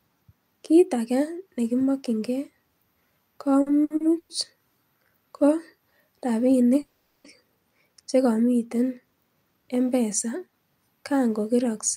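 Repeated stalls (stutter) run from 3.61 to 4.32 s. Packets reached the receiver late, so its jitter buffer emptied four times. Each gap, the longest 110 ms, was bridged by stretching the last sound, about 260 ms in all, over a third of that span. The speech drags and stutters, with nothing lost.

A call audio freeze follows from 6.81 to 7.27 s. The speech halts and the last sound is held as a buzz or hiss that fades for about 430 ms, never dropping to silence, then resumes where it stopped. The likely cause is packets held up in transit draining the jitter buffer, which leaves everything after it running 430 ms later.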